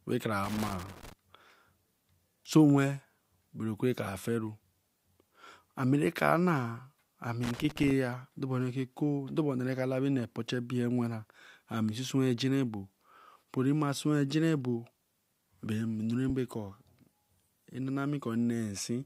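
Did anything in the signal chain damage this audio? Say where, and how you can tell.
Yes. Loose connector crackle in the analogue wiring appears from 0.44 to 1.13 s and again from 7.43 to 7.91 s as irregular scratchy bursts. A worn contact repeatedly breaks and remakes the circuit, chopping the speech and popping on any DC. The bursts are uneven, unlike periodic digital dropouts.

At 16.29 s there are lost LE Audio frames at the Bluetooth codec stage. About 7.5 ms of speech turns into a brief noisy smear, which fits one lost LC3 frame that the decoder concealed by repeating the previous spectrum with scrambled signs. It sounds like a smear rather than a click or a hard gap.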